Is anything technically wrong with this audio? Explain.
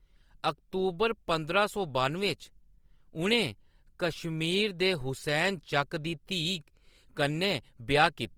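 Yes, Opus compression damage is plainly audible throughout the speech. The grainy, rough texture likely comes from Opus in its music mode at a low bitrate around 24 kbps, where starved bands are filled by folding lower ones or with noise. On a spectrogram, content reaches about 20.2 kHz but looks smeared and noisy, with few holes.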